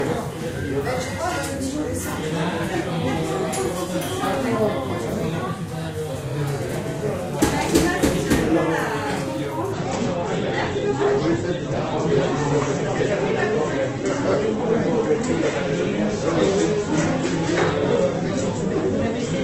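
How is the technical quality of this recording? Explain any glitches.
The first half is clean, but the quality falls sharply from 9.73 s to the end at 19.44 s. The stream switched to a lower bitrate at that point. The change is abrupt, with no gap or dropout.

From 9.73 s onward, the adaptive stream drops to a lower bitrate, likely because the connection slowed. It sounds like a fall from about 64 kbit/s to 12 kbit/s in the same Opus codec. With so few bits, the encoder discards everything above 8.1 kHz and rebuilds the remaining detail coarsely, so the top end turns dull, and smearing and warbling artefacts rise. On a spectrogram, the energy above 8.1 kHz is cut off by a flat horizontal ceiling starting at 9.73 s. On the waveform, the trace continues without any break at that point.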